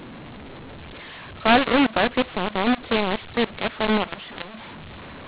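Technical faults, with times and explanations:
Throughout: mu-law and A-law mixed up. A-law telephone speech is decoded as mu-law, scrambling sample levels into harsh, gritty distortion. The waveform shows uneven peaks and pauses lifted off silence. The spectrogram shows noise-filled gaps below the 4 kHz ceiling, fitting 8 kHz telephone sampling.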